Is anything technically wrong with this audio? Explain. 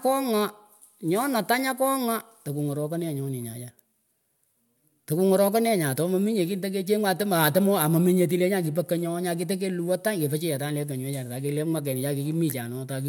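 No, nothing technically wrong stood out on listening to this speech recording.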